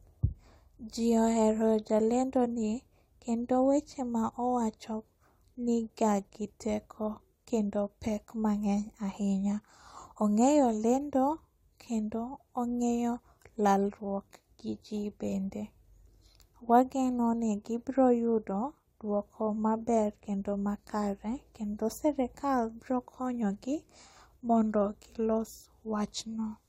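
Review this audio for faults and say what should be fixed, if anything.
Nothing needs fixing in this speech recording. No technical faults can be heard anywhere in it.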